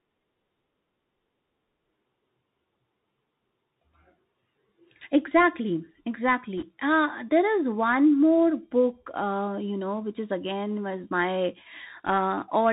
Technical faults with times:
0.00-12.72 Bluetooth CVSD headset codec
6.58-6.64 bit errors on a Bluetooth voice link

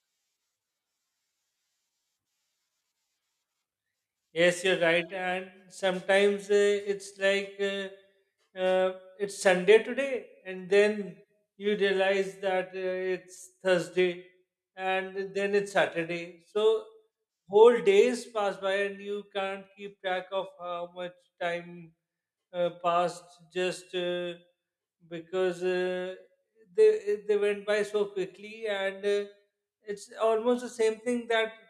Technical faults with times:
none

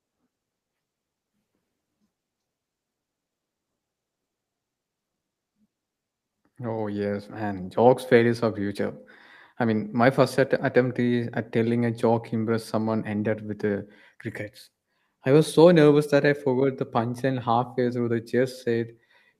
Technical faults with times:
none

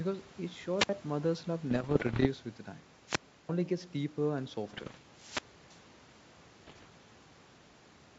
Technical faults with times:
0.77-0.89 wireless microphone squelch dropout
1.70-2.29 bit errors on an ADPCM link
3.06-3.49 wireless microphone squelch dropout
4.68-4.99 bit errors on an ADPCM link
5.14-5.80 wireless microphone squelch dropout
6.67-6.87 bit errors on an ADPCM link

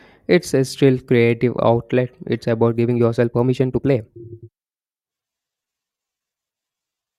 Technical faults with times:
2.67-7.18 time-stretched section

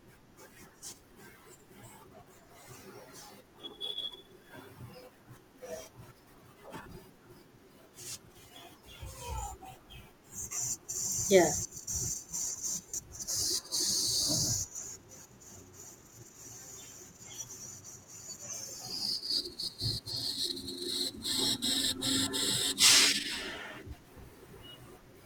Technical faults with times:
3.61-3.64 lost LE Audio frames
6.82-6.86 lost LE Audio frames
12.89-12.94 lost LE Audio frames
14.66-14.78 lost LE Audio frames
21.46-21.50 lost LE Audio frames

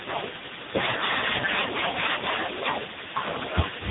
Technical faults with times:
0.00-3.90 AMR narrowband mobile codec

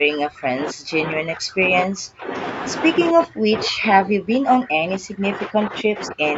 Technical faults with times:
0.00-2.33 speech suppressed in double talk
3.11-6.38 speech suppressed in double talk

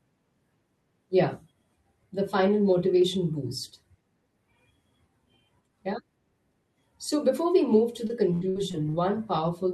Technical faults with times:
8.07-8.95 repeated packet loss (robotic sound)

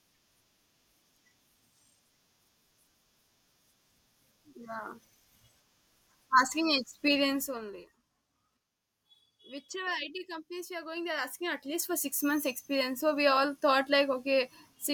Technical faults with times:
7.30-7.87 zipper noise
10.76-12.04 zipper noise

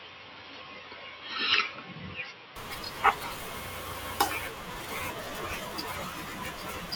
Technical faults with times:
0.00-2.56 input switched to a poorer device

